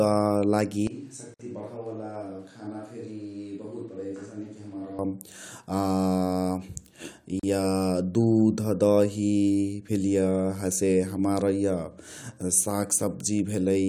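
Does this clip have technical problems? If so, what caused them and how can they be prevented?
Yes. From 0.87 s to 4.99 s the speech turns roomy and hollow, loses low end, drops roughly 10 dB in level, and sits over room noise only about 30 dB below it. Both transitions are abrupt. This is most likely a switch to a distant microphone: the close microphone's feed dropped out and a far-off pickup such as a camera microphone covered the gap. Prevent it by recording the close microphone to a redundant backup track and monitoring it during capture.

Short silences cut into continuous speech at 1.34 to 1.40 s (54 ms) and at 7.40 to 7.43 s (37 ms), six seconds apart, with smeared edges before the sound resumes where it stopped. This is a gap at a join of encoded pieces. The audio appears to have been encoded in 6-second segments and concatenated, so each segment kept its encoder start-up delay and final-frame padding as dead air. 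Prevent it by trimming encoder delay and padding at each join, or by encoding the whole programme in one continuous pass.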